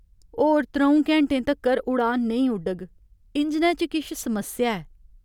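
No technical faults can be heard in this recording.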